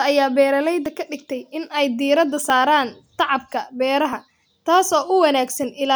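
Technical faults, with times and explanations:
0.86 s, 2.50 s and 4.13 s: dropped buffer (overrun). The capture software likely missed reading its buffer before the hardware overwrote it, losing roughly 10 ms of speech at the first two and 20 ms at the third, so each sounds like a small jump forward. The first comes just before "ka dhigtay in ay", the second just after "dhigtay in ay diiradda".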